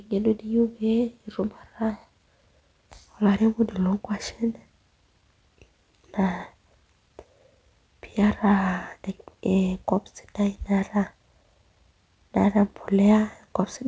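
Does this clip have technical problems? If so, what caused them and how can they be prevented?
No, there are no technical problems in this speech clip. It has gone through a WebRTC call path whose coding, consistent with G.722, leaves nothing above 8 kHz, which is the expected limit of that codec.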